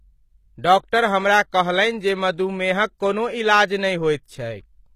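Speech whose s sounds turn gritty and metallic throughout, with nothing above 14.9 kHz; likely HE-AAC compression near 20 kbps, rebuilding the treble from copied lower bands.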